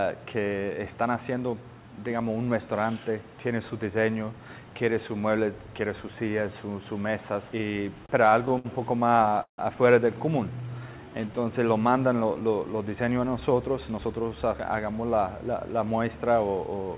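From 8.06 to 9.60 s there's a run of repeated stalls (stutter). The packets evidently weren't keeping pace with playback, so the jitter buffer kept draining and the receiver had to stretch out whatever it last had to bridge each hole. That happens about a dozen times, adding roughly 360 ms of filler and covering close to a quarter of that stretch. The longest wait, about 154 ms, fades out. Nothing actually drops out, but the sound drags and hiccups.

Next, between 10.61 and 11.46 s, you get a jitter buffer slow-down. The buffer was running thin, so the receiver rebuilt its cushion by repeating tiny pitch-period-sized slices over and over. That added about 130 ms and ran the audio at around 86% speed. The pitch stays put, but things sound stretched and a bit sluggish, with a faint wobble in places.

Then from 13.40 to 14.92 s it swings the other way, with a jitter buffer speed-up. Too much audio had piled up in the buffer, so the receiver trimmed out short pitch-period chunks in quick succession, about 150 ms in total. 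Playback runs at roughly 111%, the same pitch but noticeably rushed, as if it's hurrying to catch up.

Throughout, the call path itself cuts everything above 4 kHz, which points to G.711 mu-law at 64 kbps.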